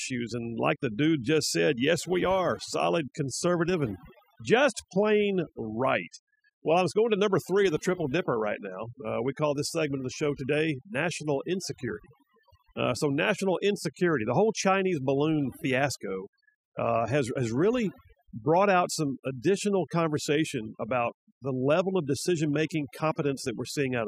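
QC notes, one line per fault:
Throughout: overdone noise removal. A noise reduction stage was set too aggressively on a noisy speech recording, so any frequency band sitting close to its noise estimate gets pulled down hard or switched off entirely, and the softer parts of the voice are caught along with the noise. Between phrases the background drops and breaks up into twinkling, chirpy specks.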